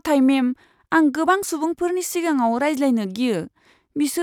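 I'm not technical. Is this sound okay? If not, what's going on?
Yes, this recording is okay. Nothing in it stands out as a technical problem at any point.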